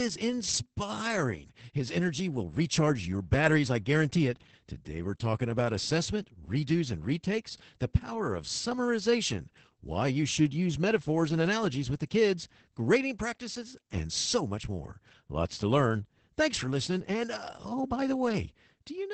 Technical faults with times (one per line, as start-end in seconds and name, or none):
0.00-19.13 Opus voice compression